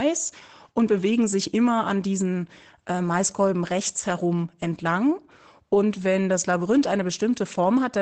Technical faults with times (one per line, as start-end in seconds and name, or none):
none